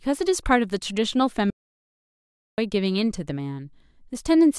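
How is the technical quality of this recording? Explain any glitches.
There's one real problem here. From 1.50 to 2.58 s the speech hits an audio dropout to silence: about 1.08 s of dead silence, no room tone at all. The input was likely lost briefly while recording kept running, so whatever was said then is gone.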